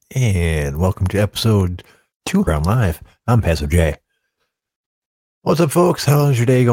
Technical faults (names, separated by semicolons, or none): stream segment skipped